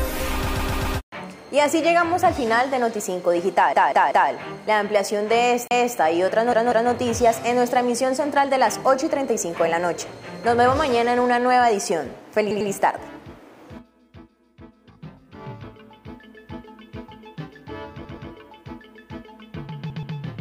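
Repeated frames at 0.46–0.98 s and 3.73–4.30 s: a block of compressed frames replays, a 128 ms chunk four extra times, then a 192 ms chunk three times, heard as stutter. CD skip at 5.68–5.71 s: the laser jumped tracks, giving a mute of a few hundredths of a second and a jump to a different spot. Repeated frames return at 6.52–6.91 s (192 ms, twice), 12.51–12.70 s (96 ms), 18.04–18.30 s and 19.90–20.16 s (128 ms each), each repeated twice and lengthening the audio.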